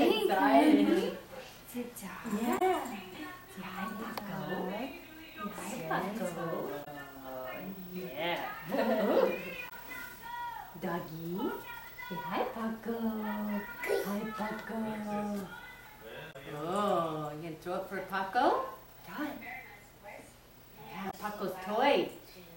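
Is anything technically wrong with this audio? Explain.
Yes. Damaged data in a compressed stream occurs five times, for about 70 ms each: 2.55–2.62 s, 6.81–6.88 s, 9.65–9.72 s, 16.29–16.36 s and 21.07–21.14 s. Corrupted bytes cause the decoder to misread frames and lose sync until it finds the next valid header, producing brief chirps or blips.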